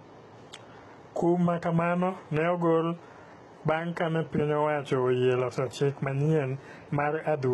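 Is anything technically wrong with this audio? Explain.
Yes, the speech carries heavy coding damage for the whole clip, and it sounds like HE-AAC compression is likely behind it. Nothing comes through above about 11.8 kHz, yet the treble still reaches up that far, because that top range is rebuilt by copying lower bands upward and shaping them with a coarse envelope rather than coding them directly. The copied harmonics don't line up with the real ones, so s sounds come out gritty, metallic and a bit lispy. The damage points to a very low bitrate, around 16 kbps.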